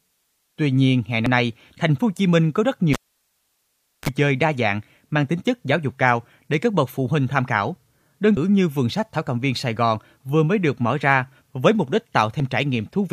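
Speech clip with three brief faults from damaged data in the compressed stream, at 1.26 s (between "nhiên hè" and "nay thành phố"), 8.37 s and 12.40 s, where the decoder loses sync. At 2.93 s, after "có rất", the cable was pulled and plugged in: a pop, about 1.1 s of near silence, a brief 50 Hz buzz burst lasting around 34 ms, then another pop, with sound returning at 4.09 s on "chơi đa dạng mang".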